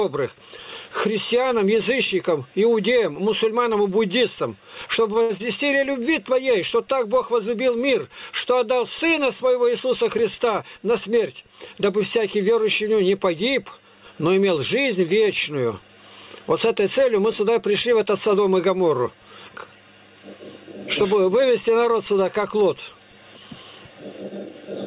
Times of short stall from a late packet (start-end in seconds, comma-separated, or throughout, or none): 5.22-5.31